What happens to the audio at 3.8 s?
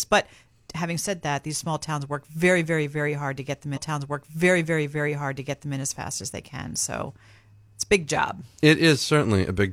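A stream segment repeat runs from 3.72 to 5.72 s. Right after "hard to get them", the player delivers the same chunk of the stream a second time, as if that segment had been fetched or queued twice. About 2.0 s of the speech plays over again, with a small blip at the point where playback jumps back. The clip then carries on normally into "in as fast as".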